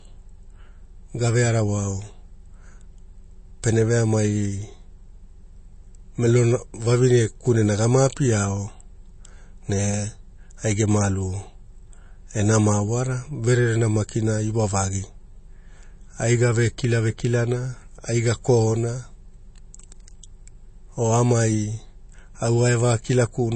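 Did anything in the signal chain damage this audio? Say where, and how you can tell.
Yes. The damage is at the codec stage and runs through the whole speech clip: nothing is present above about 8.3 kHz, and the remaining band sounds watery and swirly, with s sounds turning metallic and consonant onsets smeared. The likely cause is MP3 compression at a low bitrate, around 32 kbps. A simple low-pass filter would remove the treble cleanly. Here, weak frequency components switch on and off from frame to frame, which gives the warbling texture.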